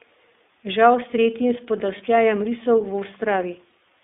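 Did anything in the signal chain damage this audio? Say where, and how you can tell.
Yes. At the codec stage, the whole clip carries iLBC codec damage. The speech is confined to roughly 250 Hz to 3.6 kHz and has a plainly audible rough, synthetic edge. Each 20 ms frame's excitation is coded on its own, which fits iLBC's 15.2 kbps mode.

At the network stage, there are lost iLBC frames at 1.98 to 2.02 s, just after "s tretjim", and at 3.70 to 3.72 s. Each gap fits one missing 20 ms frame. The decoder fills it by repeating the last pitch cycle with added noise, so you hear a brief buzzy, held vowel. Because frames are independent, the speech recovers immediately afterwards.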